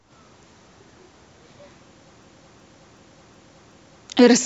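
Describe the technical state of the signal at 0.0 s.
At 0.0 s the speech signal is intact, with no technical fault present at that moment.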